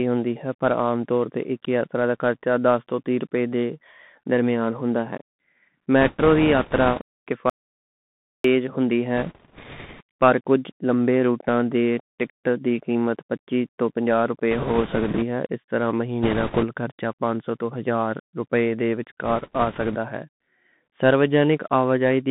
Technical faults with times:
0.00-22.30 Bluetooth CVSD headset codec
6.01-7.03 bit errors on a Bluetooth voice link
7.50-8.44 audio dropout to silence
9.17-10.01 bit errors on a Bluetooth voice link
14.51-15.23 bit errors on a Bluetooth voice link
16.23-16.65 bit errors on a Bluetooth voice link
19.25-19.96 bit errors on a Bluetooth voice link

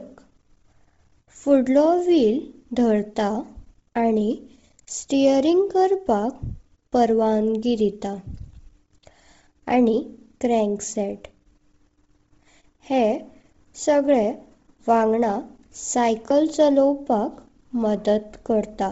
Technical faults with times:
0.00-18.91 Bluetooth LC3 compression
16.30 audio missing between chunks

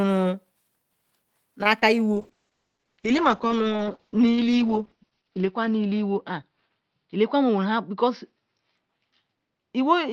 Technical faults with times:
1.63-1.67 short stall from a late packet
1.79-1.83 short concealed packet loss
2.13-10.12 call bitrate drop

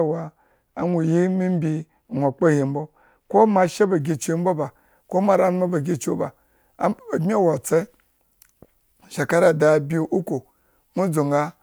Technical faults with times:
4.00-11.63 pre-emphasis left on

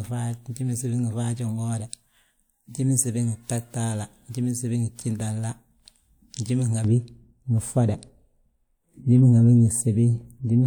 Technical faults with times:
6.84-10.66 de-emphasis applied wrongly

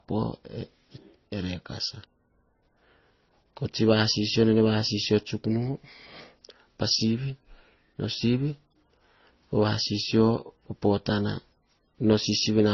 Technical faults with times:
0.00-12.73 transcoding between lossy codecs

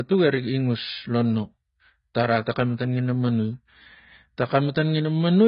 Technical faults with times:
0.00-5.48 AAC compression

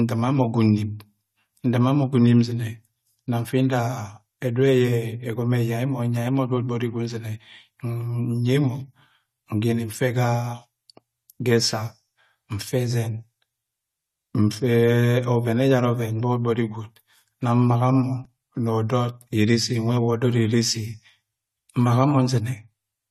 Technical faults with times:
0.00-23.10 low-bitrate audio saved at a high bitrate

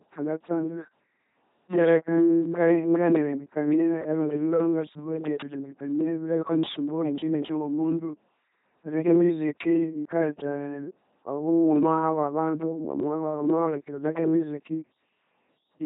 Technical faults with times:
0.00-15.85 LPC-10 vocoder

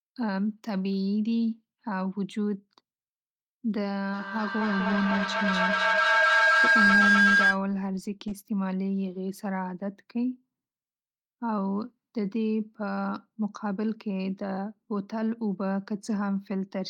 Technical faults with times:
4.13-7.62 feedback howl

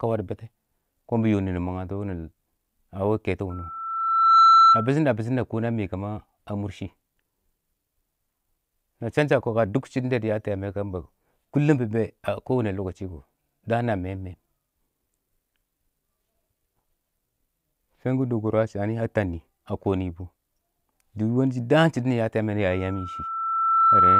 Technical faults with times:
3.50-4.94 loudspeaker feedback squeal
22.70-24.20 loudspeaker feedback squeal

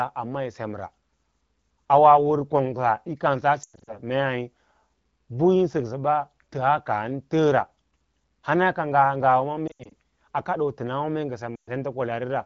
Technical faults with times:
3.63-3.99 lost AMR speech frames
9.67-9.92 lost AMR speech frames
11.56-11.69 lost AMR speech frames

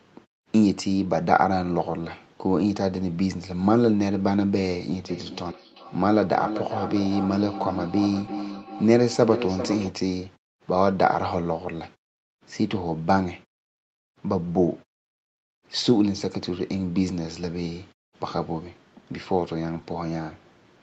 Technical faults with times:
5.09-10.02 feedback echo between two devices
7.46-8.38 jitter buffer speed-up

